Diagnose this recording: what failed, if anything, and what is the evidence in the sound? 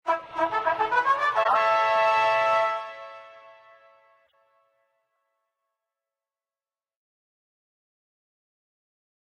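The codec stage failed: corrupt frames were decoded rather than concealed. From 1.43 to 1.60 s a harsh, loud burst of noise rises close to full scale, and from 4.27 to 4.34 s a much shorter burst peaks very faintly, around -55 dBFS. Flipped bits made the decoder misread gains and spectral codes, so it placed energy at the wrong frequencies for the duration of each damaged frame. The lengths of the two bursts suggest a run of several consecutive frames the first time and only a few the second. On a spectrogram each appears as a block of scattered, unrelated bands with hard edges in time. On the waveform the first is a sudden loud slab and the second is a small disturbance.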